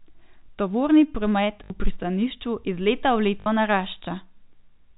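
Packet loss with the last packet repeated occurs at 1.64 to 1.70 s, just before "pristanišču iz leta v", and again at 3.40 to 3.46 s, right after "pristanišču iz leta v". Each time about 60 ms of the speech goes missing, which fits three 20 ms packets. The receiver fills the gap by replaying the last packet it got, and the repeats buzz at about 50 Hz. The result is a brief robotic stutter. Around the gaps, the telephone-band G.711 sound stays dull, with nothing above 4 kHz.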